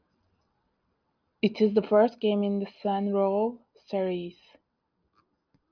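No technical faults can be heard anywhere in this recording.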